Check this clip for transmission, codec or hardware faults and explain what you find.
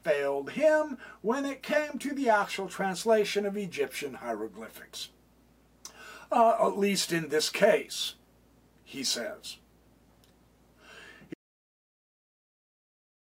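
There is one fault, an audio dropout to silence starting at 11.34 s and lasting to the end of the clip. The sound stops abruptly mid-flow and is followed by silence with no room tone at all. The likely cause is a lost input, such as a disconnected device or an accidental mute, while recording carried on writing silence. The waveform becomes a flat line, and the spectrogram turns uniformly blank across all frequencies.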